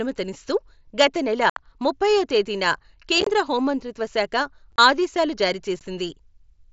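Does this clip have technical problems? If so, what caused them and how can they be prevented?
Yes. Voice packets between headset and phone were dropped and replaced with silence, with no concealment to cover them. This is unconcealed Bluetooth headset packet loss. The sound cuts out abruptly at 1.50–1.57 s, a 67.5 ms hole and the longest. At 3.21–3.27 s and 4.72–4.78 s, shorter gaps scattered over 60 ms make it choppy. A brief 15 ms dropout follows at 5.79 s. Keeping the headset near the phone, away from 2.4 GHz interference, and enabling packet loss concealment would prevent this.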